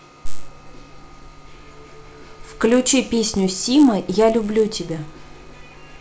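From start to end the speech carries a buzz at 100 Hz, produced by a resampler restarted on every block. Each 10 ms block was converted from 44.1 kHz to 16 kHz in isolation, so the filter lacked true neighbouring samples at every block edge and left a small error there. Unlike mains hum or a steady interference tone, this buzz follows the signal, sounding with the speech and vanishing in the pauses.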